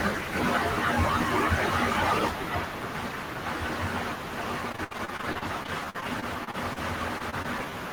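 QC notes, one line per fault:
4.69–6.78 s, repeated packet loss (robotic sound): packets kept arriving lost or late across this two-second stretch, leaving what sounds like around twenty separate holes, the longest about 65 ms. The receiver patched each one by extending the preceding sound, so roughly a fifth of the span, about 430 ms in all, is synthesised rather than real. Because the patches come in quick succession, the speech turns choppy, with fragments missing between repeated continuations.
7.18–7.22 s, 7.30–7.34 s and 7.42–7.46 s, short concealed packet loss: three brief dropouts in a row, each costing about 20 ms of the call, arrived too late to decode. Each time the decoder bridged the gap by continuing the last sound, following its pitch where voiced and substituting shaped noise where not, before easing back into the real signal. At this size and spacing the result is a string of small smears or wobbles in the closing speech.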